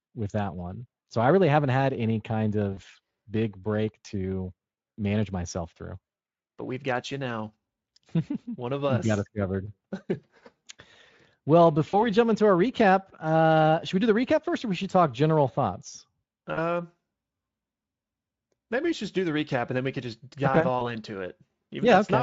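At 2.73, 11.89, 16.53 and 20.79 s, VoIP packet loss concealed by the speech codec: the Speex decoder fills missing frames, roughly 40 ms at the first three and 20 ms at the last, by repeating its last pitch with falling gain. Unlike a silent dropout, each gap becomes a brief buzzy or noisy smear that fades and lingers.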